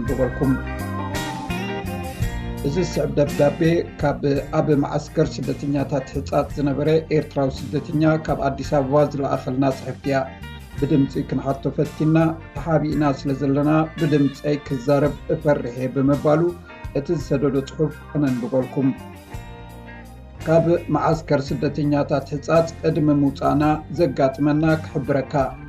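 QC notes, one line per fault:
Nothing stood out on listening.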